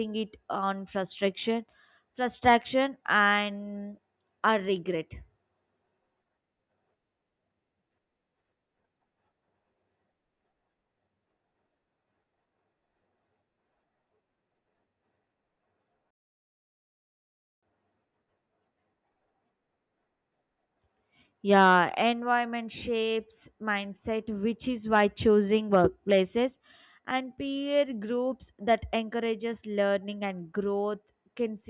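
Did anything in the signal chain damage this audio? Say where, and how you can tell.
No, nothing stood out on listening to this speech that would point to damage anywhere in the signal chain.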